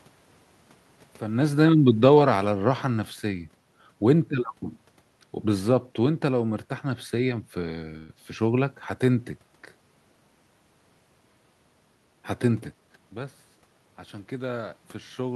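Speech recorded with room noise in the background. Between 1.46 and 3.47 s an automatic gain falling fault occurs: the level eases down by about 5 dB over two seconds. The room noise sinks with the speech, which shows that the gain control is turning everything down. A talker moving, as happens naturally around 1 s, would change only the voice and leave the background where it was. From 7.97 to 8.11 s the sound stalls into a short, fading continuation of the last sound for 114 ms and then resumes exactly where it left off. This is a call audio freeze. Nothing is lost, but a 114 ms gap is inserted and the delay grows by that much. The likely cause is delayed packets that let the jitter buffer run dry while the receiver stretched the last sound. It differs from packet loss, which would drop part of the speech instead of pausing it. Between 12.06 and 13.13 s a jitter buffer speed-up makes the speech run at about 110% speed. 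The receiver trims roughly a tenth of a second in small pitch-period slices to work off the built-up delay. The pitch stays the same, so it sounds hurried rather than higher, which separates it from a playback-rate change. The level shift near 13 s is the talker moving, not part of this fault.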